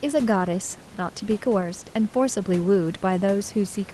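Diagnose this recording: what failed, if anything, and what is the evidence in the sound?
Nothing failed in this recording.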